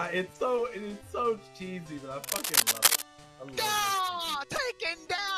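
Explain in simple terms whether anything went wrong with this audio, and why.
From 2.22 to 3.02 s, cable scratch noise appears: a burst of dense, uneven scratching and rustling that sits on top of the audio and is louder than the sound itself for that moment. The likely cause is a worn cable, plug or control being moved, so that its electrical contact kept making and breaking very quickly. Each change in contact adds a small crackle, and many together produce this scratchy layer.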